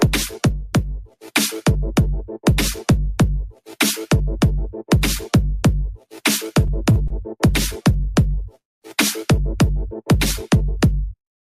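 From 0.57 to 1.23 s, the noise suppressor mistook part of the sound for noise and turned it down by up to about 12 dB. Roughly half a second of that span sinks in level compared with its surroundings.

At 6.92 to 6.99 s and again at 7.08 to 7.13 s, short stalls from late packets occur. Each time, a packet arrived late and the jitter buffer ran empty, so the receiver stretched the last sound, by 37 ms and then by 25 ms. Nothing is lost, but the sound is briefly held too long each time.

At 8.61 to 8.85 s comes a call audio freeze, likely caused by packets being held up in transit until the jitter buffer ran dry. A gap of about 207 ms opens, nearly all of it silence, and the audio then resumes exactly where it stopped, with nothing missing.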